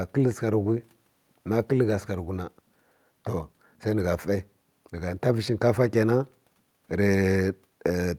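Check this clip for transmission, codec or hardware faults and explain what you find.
Nothing stands out in this speech recording: there's no transmission, codec or hardware trouble to point to anywhere in it.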